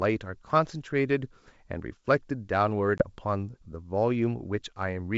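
Packet loss on an ADPCM call at 2.98 to 3.05 s: about one packet's worth of speech, 20 ms, drops to silence with hard edges. The decoder's adaptive predictor and step size lose track of the sender's, so the wideband G.722 speech resumes unsteadily before settling.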